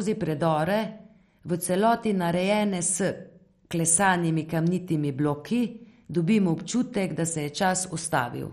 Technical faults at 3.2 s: MP2 compression

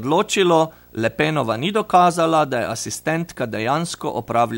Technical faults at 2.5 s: video or display buzz

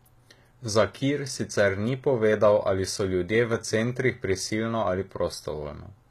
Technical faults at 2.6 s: HE-AAC compression

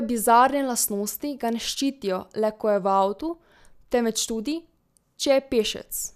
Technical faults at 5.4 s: none

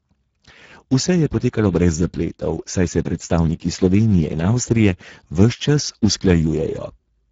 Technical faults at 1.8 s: Speex codec

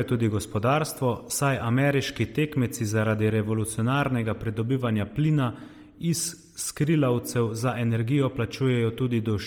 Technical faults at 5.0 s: Bluetooth LC3 compression

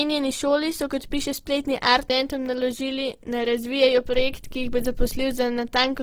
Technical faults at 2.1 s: Opus compression; CD skip

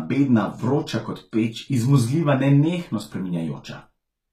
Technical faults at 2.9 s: HE-AAC compression

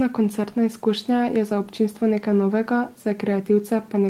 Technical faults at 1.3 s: none

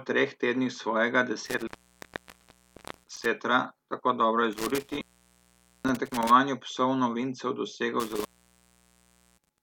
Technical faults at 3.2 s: intermittent contact

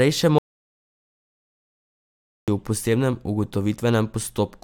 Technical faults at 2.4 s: audio dropout to silence

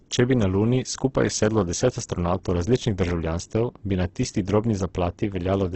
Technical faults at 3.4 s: Opus compression

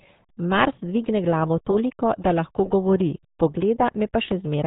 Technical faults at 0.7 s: RealAudio 14.4 codec

